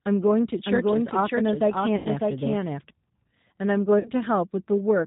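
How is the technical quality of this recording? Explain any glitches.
The technical quality is noticeably degraded, with codec roughness throughout and two brief dropouts. Throughout, the speech sounds rough, slightly synthetic and muffled above 4 kHz: the G.729 codec (G.729A at 8 kbit/s) rebuilds each 10 ms frame from a filter, pitch and few pulses. At 1.96 to 2.08 s, and again at 3.99 to 4.10 s, the sound smears into a fading buzzy tone or coloured noise. This is VoIP packet loss concealed by the speech codec, with roughly 90 ms and 60 ms of audio missing. The decoder extended its last pitch and filter at falling gain, leaving the speech weak for a moment after each dropout.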